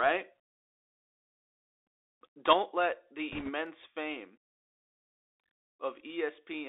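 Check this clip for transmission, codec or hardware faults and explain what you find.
The speech runs through a Bluetooth CVSD headset codec for the whole clip, and there are two short faults in the middle.

Bluetooth CVSD headset codec, throughout. CVSD sends one bit per sample, up or down, with an adaptive step. The sound points to a 64 kbps link. The band is squeezed to about 300 Hz to 3.7 kHz, so the speech sounds thin and muffled. The damage is plainly audible. Sharp, loud high sounds outrun the step and distort. S sounds turn scratchy, and a fine granular hiss sits underneath.

Bit errors on a Bluetooth voice link, 3.32 to 3.51 s. For about 0.19 s, bits on the headset link were flipped at roughly a 2 percent rate. In CVSD each bit nudges the signal by the same small step, and errors fade out as the step adapts. So there are no loud pops. Instead a rushing, crackly noise washes over the speech for that stretch.

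Dropped samples, 3.66 s. A single sharp click sounds here. The waveform jumps from one value straight to a later one, with nothing in between. The gap is far too short to lose any sound, only a couple of samples. The likely cause is a tiny loss of about 0.05 ms in the stream. In a spectrogram it would show as a thin vertical line.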